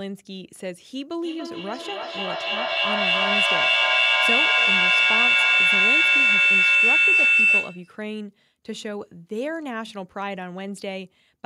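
From 1.22 to 7.99 s, feedback howl builds around 3 kHz, pulsing roughly every third of a second, peaking about 12 dB above the speech as the acoustic loop keeps regenerating.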